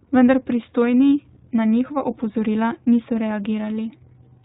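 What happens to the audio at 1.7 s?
At 1.7 s you're hearing the iLBC codec, which runs the whole clip: audio is cut off above 4 kHz, and frames coded independently leave speech audibly rough and synthetic, consistent with 20 ms framing.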